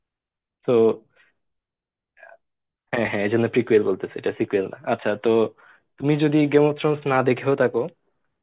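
Nothing stood out as a technical fault on listening to this speech recording.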